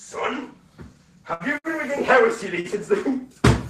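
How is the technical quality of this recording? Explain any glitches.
The recording has three network glitches, all concentrated between about 1.3 and 2.7 seconds.

From 1.33 to 1.43 s, a burst of packet loss drops about 60 ms. The receiver extends the last sound and fades it out for 66 ms, then jumps ahead. A spectrogram shows smeared, decaying bands and then an abrupt change.

At 1.58 to 1.67 s and at 2.60 to 2.67 s, there are short stalls from a late packet. The jitter buffer ran dry, so the receiver stretched the sound for about 62 ms and then 40 ms before resuming where it left off. Nothing is lost. The waveform shows a briefly repeated, flattened stretch.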